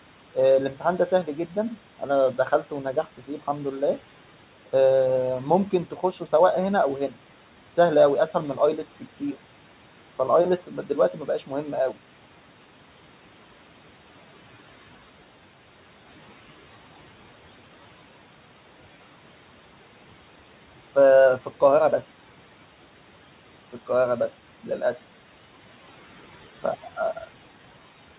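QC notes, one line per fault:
2.94 to 3.29 s, speech cut by the noise suppressor: the suppressor mistook a soft stretch of speech for background and pulled it down by about 9 dB, so roughly a tenth of a second sounds swallowed.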